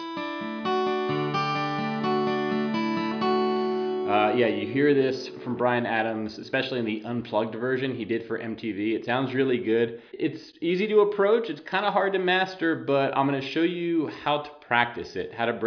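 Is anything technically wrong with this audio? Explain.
No, nothing in the audio points to a technical problem, and the signal holds steady throughout without any audible disturbance to its level, timing or frequency content.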